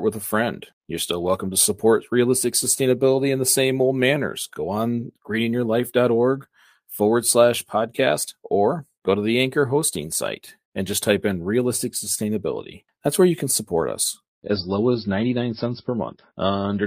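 An adaptive stream dropping to a lower bitrate is the fault in this speech clip: the connection slowed and the player switched to a much leaner encoding from 14.35 s, right after "you can support us", through to the end at 16.87 s. The change is abrupt with no gap. Everything above 5.6 kHz vanishes, and the muffled, swirly texture fits a drop from about 128 kbit/s MP3 to roughly 26 kbit/s.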